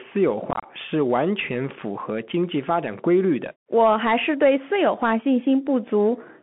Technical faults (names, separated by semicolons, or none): Bluetooth CVSD headset codec; unconcealed Bluetooth headset packet loss